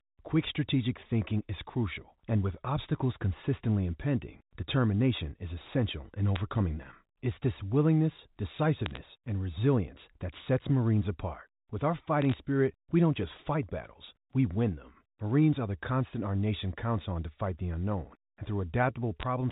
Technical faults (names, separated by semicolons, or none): bit errors on a digital phone line